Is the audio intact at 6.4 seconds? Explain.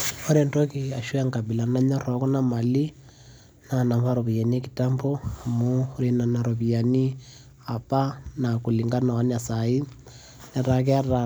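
Yes, at 6.4 seconds the speech plays through intact, with no audible fault at that moment.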